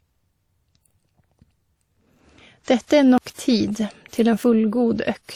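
Throughout the clip, the speech carries two layers of codec smearing. This is likely transcoding between lossy codecs: WMA at 48 kbit/s, then Opus at 48 kbit/s.

At 1.45, 3.18 and 4.44 s, there is a sudden jump forward in the speech. About 20, 40 and 70 ms go missing. Each is likely a dropped buffer (overrun), with the two sides spliced together.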